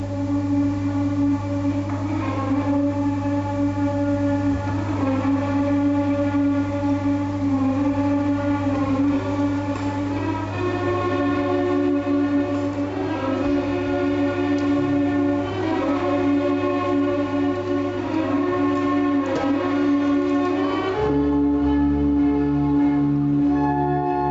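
Gain pumping runs throughout the audio, with a swing of roughly 25 dB. The gain is pulled down on every loud sound, squashing the dynamics. The likely cause is input gain set far too high, with a fast limiter repeatedly clamping it. Nothing sounds above 8 kHz, which fits a narrowed call codec bandwidth.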